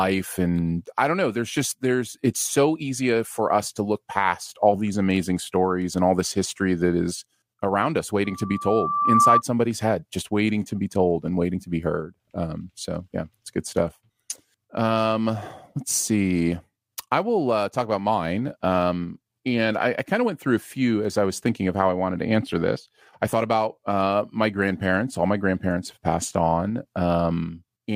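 Loudspeaker feedback squeal runs from 8.25 to 9.42 s: a microphone is hearing its own loudspeaker, and at 1.2 kHz the loop gain passes unity, so a pure tone swells over about a second until it sits roughly 10 dB above the speech.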